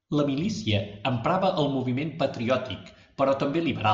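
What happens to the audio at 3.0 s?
Nothing goes wrong at 3.0 s; the speech continues intact through that moment with no dropout, click or distortion.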